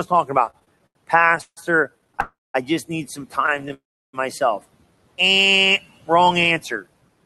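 Repeated stalls (stutter) run from 0.45 to 1.59 s. Packets arrived late again and again, so the buffer kept running dry, and the receiver stretched the last sound across 16 short gaps (the longest 155 ms), about 0.4 s in all. The speech drags and hiccups while nothing is lost. Shorter bursts of the same stutter follow at 1.99 to 2.20 s and at 3.46 to 3.72 s, each with six small gaps.

A call audio freeze follows at 2.20 to 2.56 s, likely from packets held up in transit. The last sound is continued, fades, and then drops to silence for about 0.2 s. Playback resumes where it stopped, so a 338 ms gap is inserted. A second freeze at 3.74 to 4.15 s adds 397 ms, of which about a third of a second is silent.

Jitter buffer speed-up runs from 6.51 to 7.24 s. After the delays the buffer held too much audio, so the receiver cut out tiny pitch-period slices, removing roughly 50 ms. The speech plays at 107% speed without changing pitch and sounds slightly rushed.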